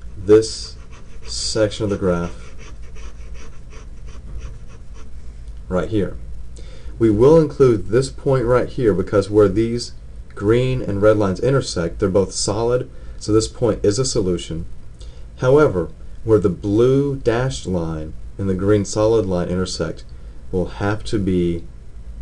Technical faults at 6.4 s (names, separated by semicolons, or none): none